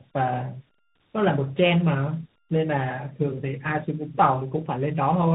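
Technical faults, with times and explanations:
Throughout, tandem speech coding: the speech sounds rough, muffled and warbly, with nothing above about 3.8 kHz. This fits a call passing through two speech codecs in a row, such as a low-rate coder like AMR-NB followed, after a G.711 A-law link, by CVSD. Each border decodes and re-encodes the signal, so the second coder works on the first one's artefacts and adds its own. The result is coarser than either coder alone.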